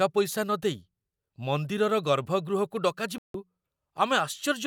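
At 3.18 s the speech cuts out in a digital broadcast dropout. The receiver stopped getting usable frames, either losing the signal or rejecting frames that failed their checksum, so it muted until clean data returned at 3.35 s. The gap of about 160 ms fits roughly five lost frames, and whatever was transmitted in that span is gone. On a waveform it shows as a flat line. On a spectrogram it is a blank vertical band across every frequency.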